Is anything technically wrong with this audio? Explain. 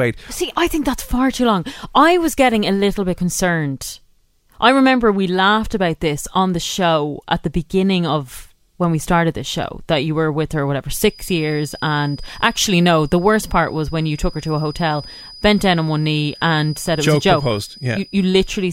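Yes. From 11.0 s, right after "were with her whatever", a feedback whistle runs to the end at 18.7 s: a thin, steady 4.9 kHz tone, roughly 25 dB below the speech and slowly swelling and fading in level. It is likely a loudspeaker-to-microphone loop held just at the edge of feedback. On a spectrogram it shows as one unbroken horizontal line.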